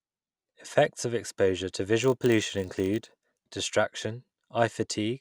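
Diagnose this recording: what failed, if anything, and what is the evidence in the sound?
A filter in the call processing chain is losing its state at every block boundary and restarting from silence. From 2.02 s to 3.56 s, just after "of exposure to", this puts a 50 Hz buzz under the speech that rises and falls with its level, which fits 20 ms blocks.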